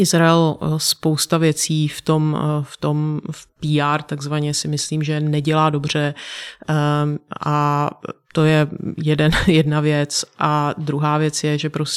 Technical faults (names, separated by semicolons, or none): none